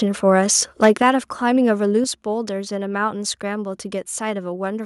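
A short speech recording breaks into a harsh, crackling edge from 0.82 to 1.02 s, where peaks are pushed about 5 dB past the converter's limit and a few percent of samples are flattened. This is microphone overload, likely from input gain set too high. On a waveform the tops appear squared off, and a spectrogram shows broadband smearing above the voice harmonics. At 1.02 s the whole signal, voice and background together, drops by about 6 dB, and at 2.04 s it drops again by about 5 dB. These are microphone volume step-downs, likely the call software cutting the device's input level after finding the microphone too loud or clipping. The waveform envelope shrinks abruptly at each point, and the spectrogram darkens evenly across all frequencies at those instants.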